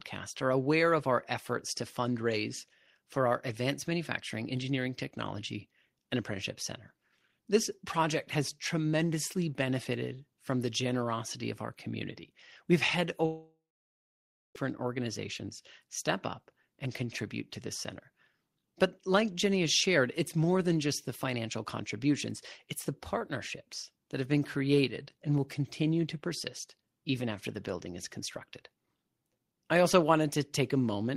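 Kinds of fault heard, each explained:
Long network dropout: from 13.25 to 14.56 s, 1.3 s of speech never plays. The last sound smears into a fading buzz, then 0.95 s of silence follows before speech resumes past the gap, likely because packets stopped arriving.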